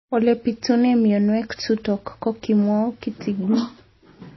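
From start to finish the speech has a hard ceiling, with nothing above 5.8 kHz, plus a plainly audible watery, swirly texture. That's likely MP3 compression: short of bits, the encoder chopped the treble and dropped weak detail, which fits a low bitrate around 24 kbps.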